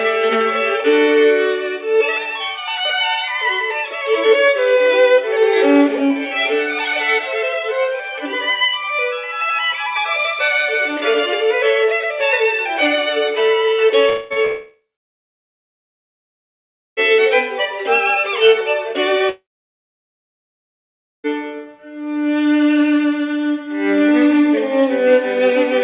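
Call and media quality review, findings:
Audio gaps at 14.09–14.33 s, 14.45–17.01 s and 19.29–21.27 s, likely a long network dropout on the receive side. At 14.09 s the last sound is carried on as a fill for about 0.21 s with no silence. The later two fill briefly, then go silent for about 2.2 s and 1.8 s. Spectrogram: a smeared, fading band, then blank frames. Waveform: a decaying tail, then flat line. Each gap resumes without the lost audio.

Short concealed packet loss at 14.33 s, about 30 ms, just after the first gap. The jitter buffer or decoder extrapolated the last sound and blended it back in, heard as a brief smear or wobble. Spectrogram: a short, blurred column. Waveform: a slightly irregular cycle before normal signal returns. G.711 band limit visible throughout: nothing above 4 kHz.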